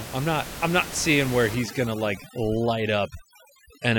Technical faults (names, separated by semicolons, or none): overdone noise removal